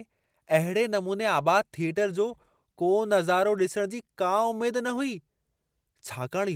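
No technical faults occur at any point in this speech clip, so there is nothing to place in time order.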